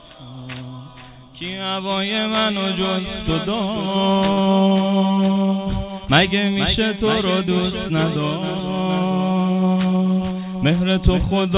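A short stall from a late packet occurs at 4.32 to 4.39 s. A packet arrived late, the jitter buffer emptied, and the receiver held the last sound for about 51 ms before resuming at the same point. Nothing is lost, but the sound drags briefly with a faint buzz or dip, and everything after plays 51 ms later, over a narrowband call path with nothing above 4 kHz that fits G.711 mu-law.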